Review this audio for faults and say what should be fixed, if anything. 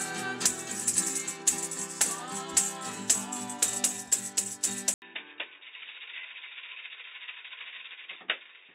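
At 4.94 s the sound drops out for 80 ms, then returns duller, boxier and about 10 dB quieter, with nothing above 3.8 kHz and new background noise roughly 30 dB below the signal until the end. The input likely switched to a poorer device. Lock the recording input to one device and disable automatic switching to headsets or their call profiles.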